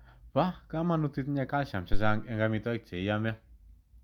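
A phantom power thump arrives at 1.93 s, just after "kamanut itinye calcium", and its tail runs to about 2.31 s, before "ing amitwogik che". Switching the supply on a live input puts a sudden DC step on the line, and the coupling capacitors pass that step through as a low, dull bump. Here it peaks at about -13 dBFS and dies away with a decay of roughly 85 ms, heard as a deep thud.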